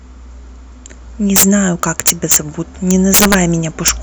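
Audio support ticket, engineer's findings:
Integer overflow on loud speech peaks. Violent cracks at 1.36–1.43 s, 1.83–2.36 s, 2.91–3.34 s, and a brief one at 3.88 s. Gain or mix stage overdriven by about 10–12 dB, about 3 dB last. Samples wrap to opposite sign instead of clamping.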